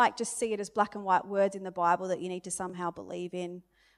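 Bluetooth stutter hits this speech clip from 2.70 to 2.74 s, right after "that you need to." For about 40 ms a short slice of audio, around 23 ms long, plays twice, giving a brief mechanical hiccup. This fits one wireless packet arriving late or not at all. The receiver refilled the gap by replaying its last buffer, then rejoined the stream further on, so roughly 23 ms of the original sound is skipped.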